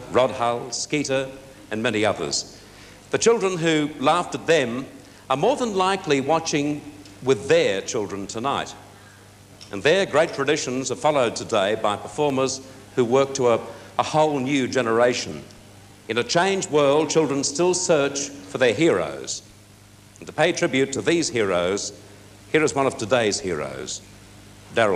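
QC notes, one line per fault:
12.30 s and 18.73 s: underrun with held sample. At each point the output buffer ran dry for a fraction of a millisecond, about 0.73 ms and then 0.41 ms, and the converter held its last sample, so the waveform goes flat at whatever level it had reached. Roughly 0.7 ms and 0.4 ms of live audio were lost during those gaps, so playback picks up a little further on than where it froze, leaving a discontinuity at each restart.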